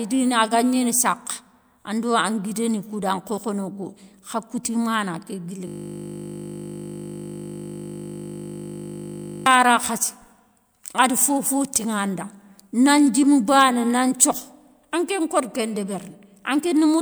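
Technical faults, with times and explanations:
5.68 to 9.46 s, system hang loop: the speech freezes into a steady 50 Hz buzz because the system stalled while the sound hardware kept replaying the same 20 ms ring buffer, repeating that short slice back-to-back nearly two hundred times.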